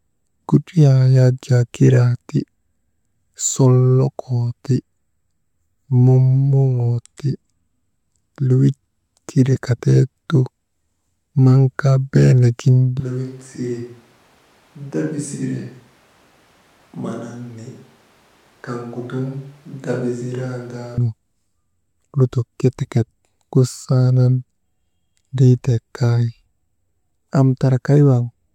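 At 13.00 s the voice suddenly turns roomy and hollow, with less bass. It drops about 10 dB in level, and background noise rises to roughly 30 dB below the speech. This is a switch to a distant microphone. The close microphone's signal was likely lost, leaving a pickup further from the speaker that captures more room reflections. At 20.98 s the close, fuller sound returns just as abruptly.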